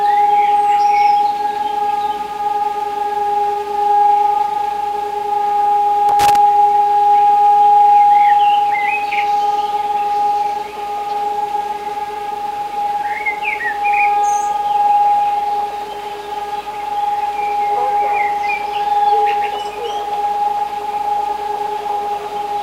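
A worn or dirty contact somewhere in the signal chain is making and breaking as it shifts, producing loose connector crackle in this recording of everyday sound. From 6.09 to 6.36 s the signal is rapidly chopped, giving an irregular quarter-second burst of scratchy crackle.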